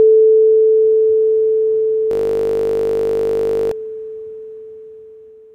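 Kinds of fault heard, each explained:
System hang loop: from 2.11 to 3.71 s the sound locks into a steady buzz at 50 Hz, one 20 ms slice repeated about 80 times. The system froze while the audio hardware kept replaying the same short ring buffer, so that fragment cycled exactly until playback recovered.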